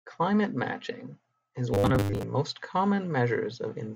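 After "matching is", 1.74 to 2.23 s, starved input likely looped a 10 ms buffer, causing robotic sound from repeated short buffers: a rigid, metallic 100 Hz buzz.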